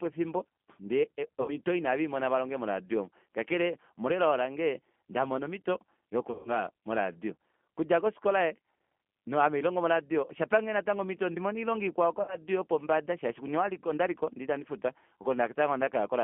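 Throughout the recording the speech sounds narrow, slightly rough and synthetic, with nothing above about 3.4 kHz and little below 200 Hz. This is the G.729 codec, here its lighter G.729A form running at 8 kbit/s. It discards the waveform and rebuilds each 10 ms frame from a vocal tract filter, a pitch predictor and a few pulses, so the damage is plainly audible.

At 1.42 s, right after "efimbo ndee", the sound smears into a fading buzz or coloured noise until 1.54 s, before "oyo ina veimona valonge". At 6.31 s, after "elao lange ndamona omito", a longer smeared stretch runs to 6.60 s, ahead of "moradio okudja kofikola". At 12.22 s a similar fade lasts to 12.36 s, just before "yopombada shaashi". Each is VoIP packet loss concealed by the speech codec. About 60 ms of audio went missing at the first and third points, which fits three 20 ms packets, and 140 ms at the second, which fits seven. 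The decoder filled each gap by extending its last pitch and filter at falling gain, and because every frame builds on the one before, the speech stays weak past the gap itself.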